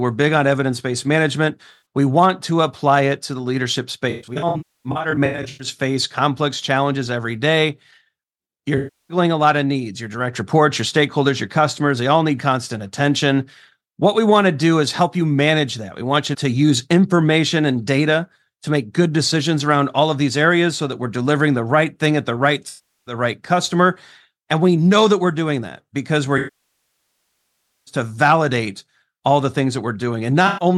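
AAC frame loss with concealment occurs at 1.71–1.84 s, 4.10–5.67 s (scattered gaps, the longest about 0.3 s), 8.77–9.17 s, 22.68–23.14 s, 26.37–27.94 s and 30.47–30.65 s. The decoder patches each gap from the last good spectrum, so short ones sound smeared and phasey, showing on a spectrogram as flat, blurred, noise-like bands. The continuous 1.5 s loss decays to a very faint noise floor before fading back, visible as a tapering waveform envelope.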